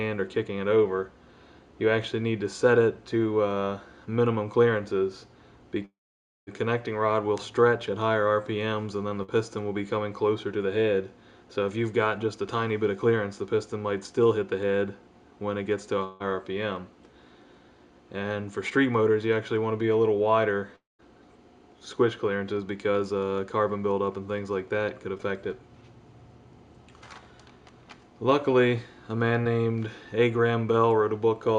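Long network dropout at 5.85 to 6.49 s: the sound trails into a fading buzz or hiss, then about half a second of silence, likely because a long run of packets never arrived.

Burst of packet loss at 9.23 to 9.30 s: about 60 ms went missing, and the receiver stretched the last sound into a brief held buzz or fading hiss before the audio resumed.

Long network dropout at 16.04 to 16.22 s: about 160 ms is missing, likely from lost packets, covered entirely by a decaying continuation with no silence.

Long network dropout at 20.76 to 21.01 s: a fading fill gives way to about 170 ms of silence, likely from packets lost in transit.

Short concealed packet loss at 25.18 to 25.21 s and 29.43 to 29.47 s: about 20 ms arrived too late each time, patched by extending the preceding sound, heard as a brief smear or wobble.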